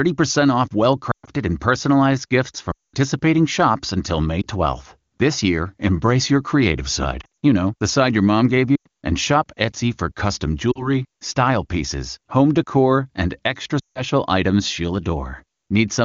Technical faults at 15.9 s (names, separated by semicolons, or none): none